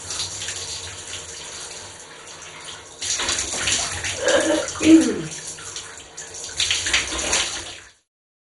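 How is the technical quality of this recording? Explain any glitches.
Quality's fairly rough. Throughout the clip, the sound is dull and gurgly, with a granular, watery distortion. Nothing comes through above about 11.2 kHz, and what's left sounds coarse. That's most likely MP2 compression at a low bitrate, something like 56 kbps. Layer II starves its upper sub-bands of bits, switches them off entirely, and quantises the rest crudely, so the bands flicker and churn. The fade-out from around 7 s to 8.1 s is smooth and clean.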